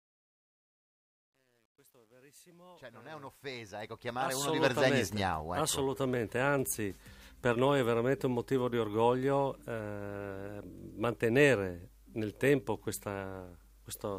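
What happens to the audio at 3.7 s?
At 3.7 s the fade-in is still gritty, inside its worst stretch (0 to 3.83 s). This is truncation distortion on a fade, present from 0 to 5.00 s: the rising level is held to about 10 bits without dither, so the quiet waveform becomes coarse square steps.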